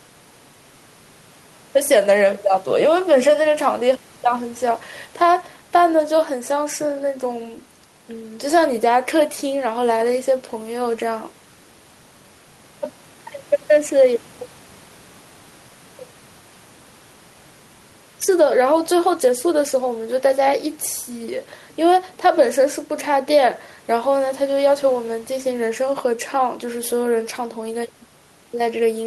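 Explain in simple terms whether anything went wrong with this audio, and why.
Nothing went wrong with this speech recording. At no point in the clip is there anything in the sound that would point to a technical problem.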